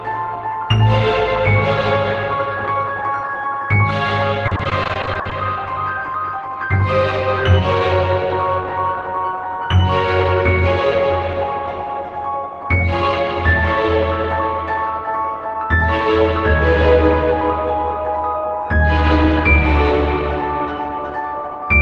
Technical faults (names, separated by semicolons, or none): repeated packet loss (robotic sound)